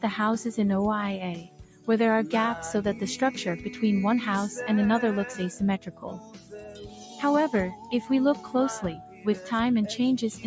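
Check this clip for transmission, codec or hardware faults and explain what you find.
A speech-oriented noise suppressor is left running over this sound, treating its steady parts as noise. That is a processing fault rather than codec or hardware damage.

Noise suppressor applied to music or sounds: throughout, sustained and fading material sinks by up to about 10 dB while attacks pass, giving pumping rather than the uniform dullness of a low-bitrate codec.

Sound cut by the noise suppressor: the sound dips at 1.35–1.88 s, 5.79–7.2 s, 7.75–7.9 s, 8.35–8.51 s and 8.96–9.47 s, by about 6 to 10 dB. Each dip falls on steady or fading sound, unlike a dropout's abrupt silence.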